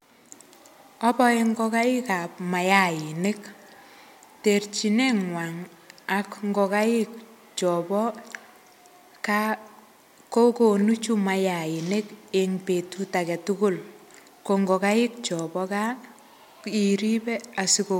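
No technical faults are audible anywhere in the recording.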